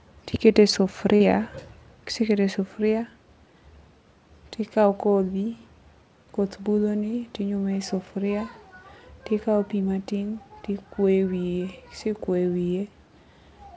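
Short concealed packet loss occurs at about 1.16 to 1.23 s in the speech. Around 40 ms of audio failed to arrive in time, and the receiver covered the gap by extending the preceding sound, keeping its pitch where it was voiced or shaping noise where it was not, before easing back into the real signal. It comes across as a brief smear or wobble. The sound is band-limited with nothing above 8 kHz, which fits a wideband call codec such as G.722.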